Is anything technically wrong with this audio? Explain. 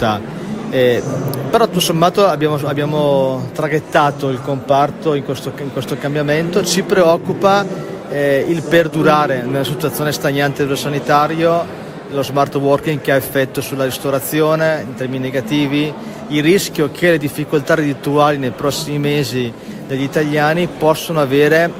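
No, nothing technically wrong stood out on listening to this audio.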